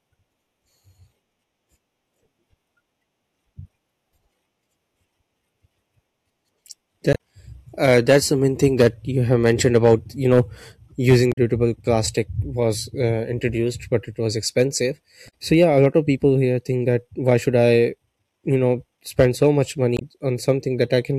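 Damaged data in a compressed stream breaks into this speech recording four times: at 7.12 to 7.16 s, at 11.32 to 11.38 s between "about you know using" and "plastic was", at 15.25 to 15.33 s after "it was expensive" and before "so yeah a lot", and at 19.96 to 20.02 s. Each is a brief glitch of 40 to 80 ms where corrupted frames are misread or skipped, and the decoder loses sync until it finds the next valid frame header.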